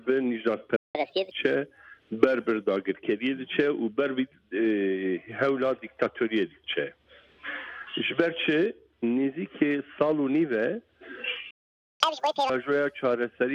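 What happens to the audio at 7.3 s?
Nothing goes wrong at 7.3 s; the audio plays through that moment intact, with no dropout, click or other fault.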